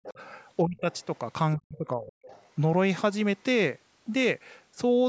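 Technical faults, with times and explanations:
0.0–0.2 s, 0.63–0.87 s and 1.57–2.13 s: speech suppressed in double talk. The speech dips sharply, by up to about 40 dB. The longest dip is at 1.57 s. Both sides were likely talking at once, so the echo canceller could not tell the talker from the echo and turned everything down.
0.06–0.12 s, 0.78–1.18 s and 2.29–2.5 s: the other side's voice leaking through. A second, fainter voice comes through behind the speech. It sits about 20 dB below the speech at first, then about 35 and 30 dB below. Echo likely escaped the canceller from the talker's loudspeaker.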